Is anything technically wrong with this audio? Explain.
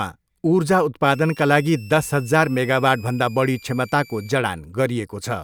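Yes, there's a switching supply whistle from about 1.14 to 4.32 s in this speech. A switching power supply is leaking an audible tone into the audio, wandering between roughly 2.3 and 2.8 kHz, sitting about 25 dB below the speech.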